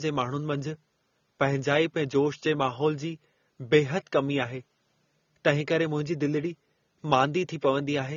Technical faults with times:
0.00-8.16 AAC compression

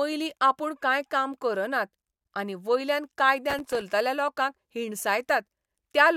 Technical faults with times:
3.50-3.81 processor overload crackle

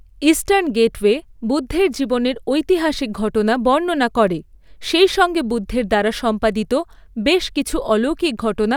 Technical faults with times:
4.28 DC step

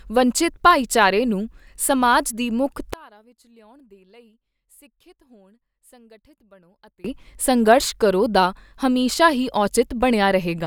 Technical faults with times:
2.93-7.04 one channel inverted

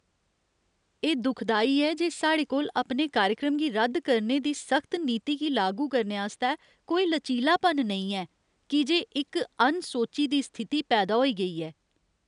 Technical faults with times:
none

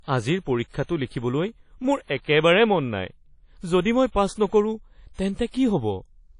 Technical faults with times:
0.00-6.39 WMA compression

